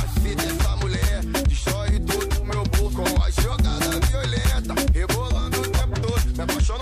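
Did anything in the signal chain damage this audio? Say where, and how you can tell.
Yes. Digital radio blending to analogue runs from 2.24 to 5.55 s at the radio receiver: a 333 ms cross-fade into the FM broadcast brings up hiss around 40 dB below the signal and a level shift of about 1 dB, then the blend returns to digital.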